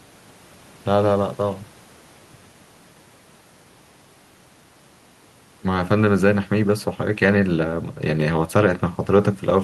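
No technical faults can be heard anywhere here.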